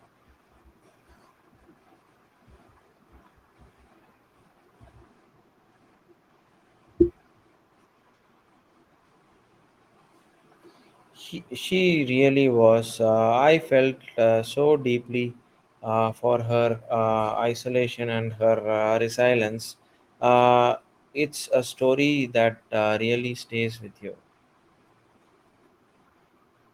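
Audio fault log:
No audible faults in this speech recording.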